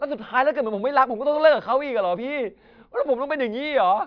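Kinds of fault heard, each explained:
No technical fault can be heard anywhere in this speech recording. There is nothing to list here.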